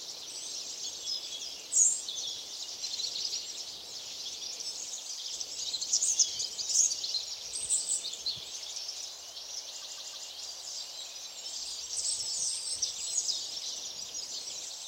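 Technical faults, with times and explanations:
9.81–10.28 s, repeated frames: a block of compressed audio was delivered again three more times, so the decoder replays the same 157 ms segment back to back. This produces a rhythmic stutter that lengthens the sound by about 0.47 s. The block length fits a short run of frames.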